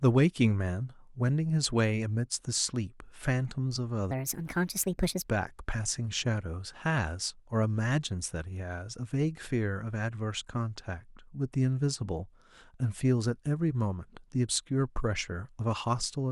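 From 0.2 s to 16.3 s, clock slip clicks run through the speech. Faint ticks repeat about ten times a second, roughly 150 in all. The likely cause is two unsynced clocks drifting apart by around 200 ppm, dropping or repeating one sample each time.

From 4.11 s to 5.28 s, a section at the wrong speed plays 1.46 times too fast. Speed and pitch rise together, by about seven semitones. The voice turns high and hurried. It was likely played against the wrong clock.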